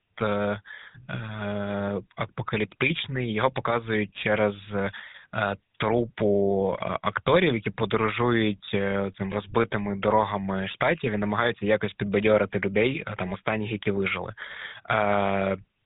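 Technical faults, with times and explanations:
Throughout, GSM full-rate codec: the speech is squeezed into a phone-style band of roughly 150 Hz to 3.7 kHz, with nothing above 3.8 kHz, and carries a plainly audible buzzy, gravelly grain. The coder keeps a model of the vocal tract and drives it with a sparse train of regularly spaced excitation pulses instead of the true waveform. That crude excitation produces the roughness, and the loss of top end fits a 13 kbps GSM full-rate stream.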